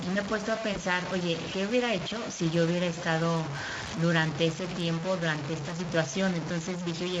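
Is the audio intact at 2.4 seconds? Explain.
No. At 2.4 seconds, as throughout the clip, the speech is coarse and grainy, with a gritty distortion that shifts with the sound and sits only slightly below it. This is likely low bit depth without dither: truncation to about 4 bits makes the rounding error follow the signal.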